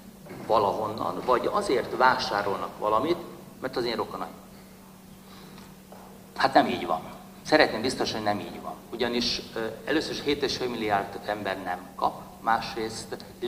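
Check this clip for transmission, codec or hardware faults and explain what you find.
The signal holds steady throughout, with nothing audible that points to a problem in transmission, encoding or the playback hardware.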